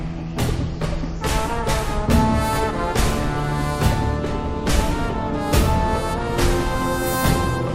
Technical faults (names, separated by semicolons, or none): none